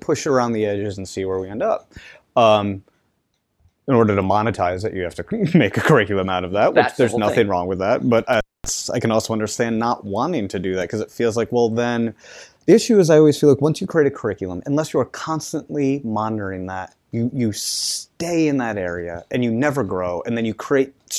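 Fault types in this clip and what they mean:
Intermittent contact: around 8.33 to 8.69 s the speech drops out with crackle at both edges, just before "I can also understand"; a loose connection opening for roughly 0.24 s.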